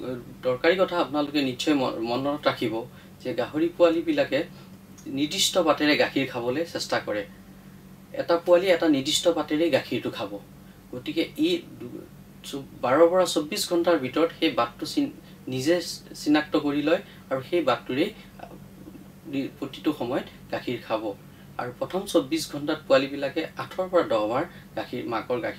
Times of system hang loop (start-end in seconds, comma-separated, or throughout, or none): none